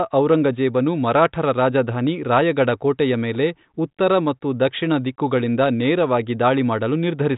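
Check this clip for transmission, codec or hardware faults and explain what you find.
No transmission, codec or hardware faults are evident here.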